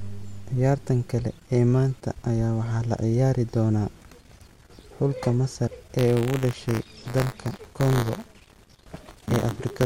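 From 5.98 s to the end of the speech, the writer and the hardware reader of the audio ring buffer have drifted out of step and cross inside every period, causing buffer tearing. A small slice of each buffer, a few percent, still holds audio from about 20 ms earlier, joined with hard edges on both sides. This repeats at 100 Hz, which fits a 10 ms buffer period, and is heard as a steady robotic buzz riding on the voice.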